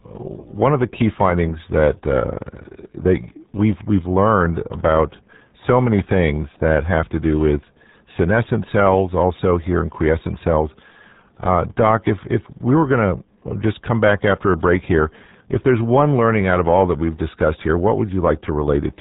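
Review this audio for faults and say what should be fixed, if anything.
The speech carries RealAudio 14.4 codec damage from start to finish. It sounds muffled and gargly, which fits a RealAudio 1 stream at about 8 kbit/s. A spectrogram shows a hard ceiling at 3.8 kHz with smeared, blotchy harmonics below it. Re-encode from the original source with a wideband modern codec at an adequate bitrate.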